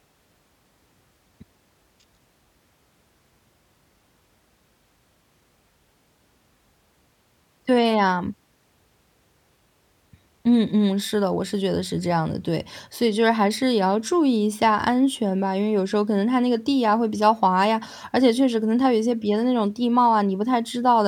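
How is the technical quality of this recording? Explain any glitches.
No glitches or technical faults are audible anywhere in the speech recording.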